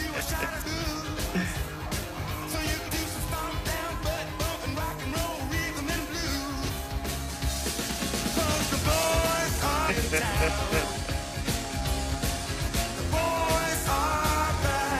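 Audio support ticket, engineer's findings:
Damaged data in compressed stream: short glitches (chirp, squawk, click or brief hole), about 60 ms each, at 0.61–0.67, 2.84–2.90, 6.64–6.70, 9.85–9.91 and 12.64–12.69 s. Decoder misreads corrupt frames, loses sync, resyncs on next header. Spectrogram: brief broadband smears. Waveform: abrupt glitch segments.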